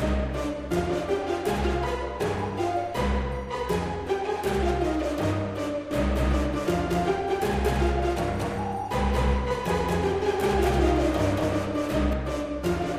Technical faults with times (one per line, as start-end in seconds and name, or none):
5.91-12.13 doubled audio track